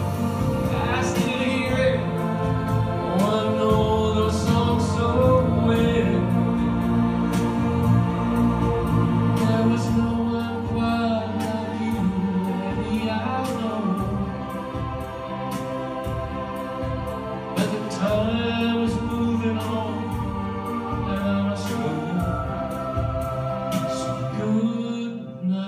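No dropouts, clicks, distortion, level jumps or timing breaks turn up anywhere in the audio.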